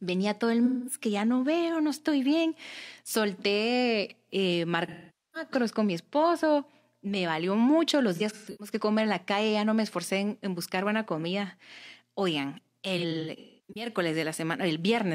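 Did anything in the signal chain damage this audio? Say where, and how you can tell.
Yes. Four concealed gaps break up the speech: 0.65 to 1.01 s, between "todo el" and "que ya no veo"; 4.88 to 5.50 s, just before "con mi esposo"; 8.15 to 8.73 s, between "valió mucho los" and "que comer en la"; and 12.98 to 13.90 s. This is AAC frame loss with concealment at the codec. The decoder covered each gap by repeating and scrambling the last good spectrum. Roughly 210, 470, 260 and 510 ms went missing, fitting runs of lost 1024-sample frames. The last two losses were scattered in bursts, with the longest run at about 150 ms and about 300 ms.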